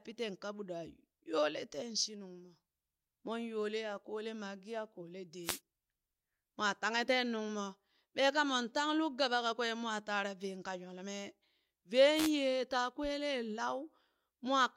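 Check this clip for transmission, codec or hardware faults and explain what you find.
Two wireless microphone noise hits occur, at 5.43–5.60 s and at 12.15–12.31 s, just before "yee taa". Each is a brief swish of static lasting under a fifth of a second that washes over the speech. The analogue FM radio link fades as reflected signals cancel at the receiver, so receiver noise surges up. Unlike a digital dropout, the sound isn't cut to silence. It is overlaid with hiss that rises and falls.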